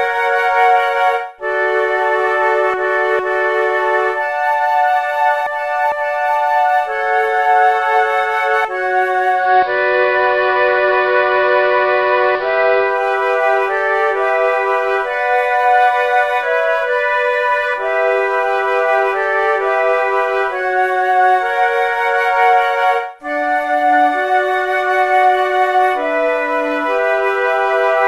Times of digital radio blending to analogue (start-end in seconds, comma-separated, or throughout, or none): 9.31-13.04